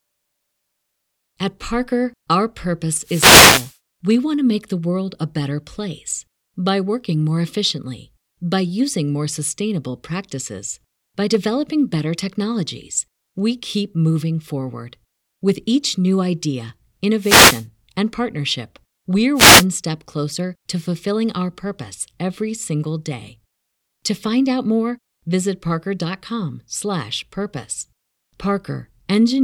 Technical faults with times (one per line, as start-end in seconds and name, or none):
3.02-3.77 wireless microphone noise hit
17.18-17.66 wireless microphone noise hit
19.34-19.66 wireless microphone noise hit